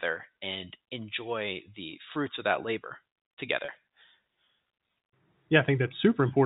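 Speech carried over G.711 telephone coding, band-limited below 4 kHz, has one packet loss with pitch repetition at 3.65 to 3.68 s, right after "of that labor together". About 30 ms of audio went missing, which fits three 10 ms packets, and the receiver filled the gap by repeating the last pitch period, so the sound briefly holds with a faint buzzy quality before normal audio resumes.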